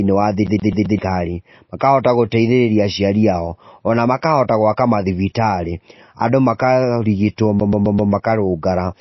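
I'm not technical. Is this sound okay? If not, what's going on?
No. CD stuck on one turn, at 0.47 to 0.99 s and again at 7.60 to 8.12 s: the same 0.13 s snippet repeats four times, like a scratched disc skipping back.

MP3 compression, throughout: the speech sounds plainly watery and dull, with nothing above 5.8 kHz, likely because the file was squeezed too hard to save space.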